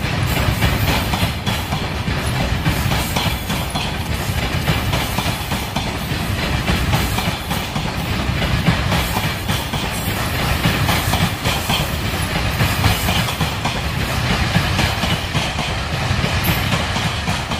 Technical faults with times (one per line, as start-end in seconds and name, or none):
4.06-5.02 GSM signalling bursts
5.02-7.33 GSM phone buzz